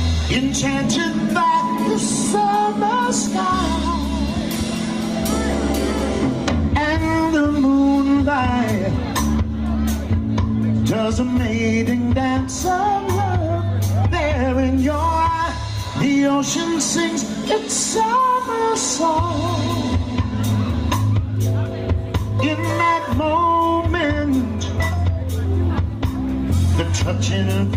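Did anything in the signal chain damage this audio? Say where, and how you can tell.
No, nothing along the chain from capture to playback left an audible mark on this audio.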